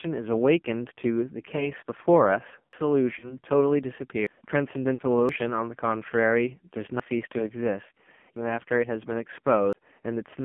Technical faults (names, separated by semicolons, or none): AMR narrowband mobile codec; lost AMR speech frames; dropped buffer (overrun)